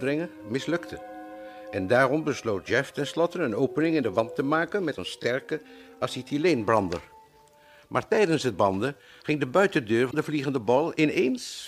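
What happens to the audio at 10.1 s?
Damaged data in the compressed stream hits from 10.07 to 10.14 s. The decoder misreads corrupted frames and loses sync, producing a brief chirp or blip.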